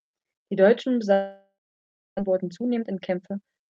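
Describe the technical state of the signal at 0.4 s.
At 0.4 s the speech is intact, with no dropout, glitch or distortion, and only the ordinary coding character of the call path it passed through.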